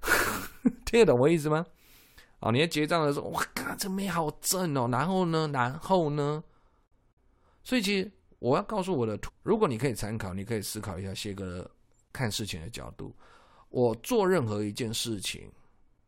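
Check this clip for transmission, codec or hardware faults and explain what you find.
One fault appears in this speech clip. From 9.28 to 9.30 s the speech jumps abruptly forward with a brief blip, most likely a stream segment skipped, where a failed segment was passed over and playback resumed with the next. Unlike a dropout, no silent gap holds the place; the speech simply continues from later material.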